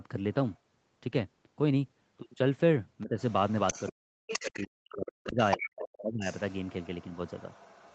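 An echo canceller that likely left part of the loudspeaker signal in the microphone lets the other side's voice leak through. At 0.51 s there is a faint scrap, far below the talker. From 3.01 to 3.92 s it is much stronger, only about 10 dB under the speech, a second voice running alongside.

While both sides talk, the canceller likely cannot tell the near talker from the echo and turns both down. This speech suppression in double talk appears as a dip of about 15 dB between 3.03 and 3.17 s, then a much deeper drop, close to silence, from 3.73 to 4.11 s.

From 4.27 s to the end of the clip the leaking voice returns at about 15 dB below the speech. Between 4.42 and 6.29 s the talker is suppressed again. The speech sinks by as much as about 40 dB, for about one and a half seconds in total.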